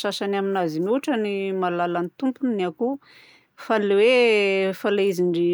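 No technical faults can be heard anywhere in the speech.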